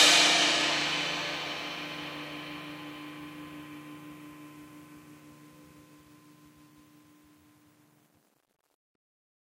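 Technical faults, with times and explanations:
No technical faults are audible anywhere in the recording.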